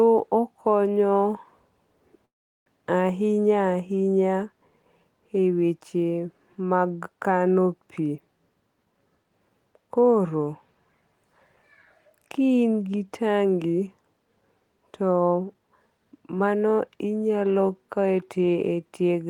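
At 2.25 s packets were likely held up and the jitter buffer ran dry, producing a call audio freeze: about 0.4 s of mostly silence until 2.68 s, after which the speech resumes intact, now 407 ms later. From 15.17 to 16.96 s the overfilled buffer triggers a jitter buffer speed-up, trimming roughly 0.4 s of pitch periods so speech runs at 120% speed, hurried but unchanged in pitch.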